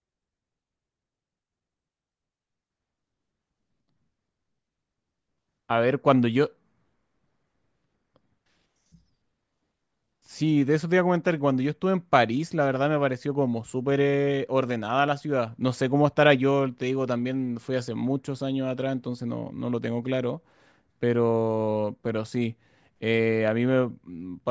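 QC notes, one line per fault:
No faults found on review of the speech recording.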